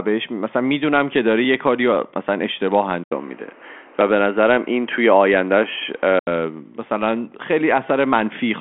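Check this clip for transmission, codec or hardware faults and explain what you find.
One fault stands out: an input switched to a poorer device, running from 3.04 s to 6.27 s. The system likely changed to a different microphone or a headset's call profile partway through. At 3.04 s the sound drops out for about 80 ms, then returns with a band narrower than the 3.8 kHz the G.726 line at 40 kbit/s carries. The level stays about the same, but the sound turns dull and boxy over a new, faint background noise roughly 30 dB down. At 6.27 s the fuller band returns.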